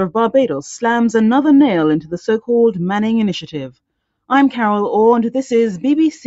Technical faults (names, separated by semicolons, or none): none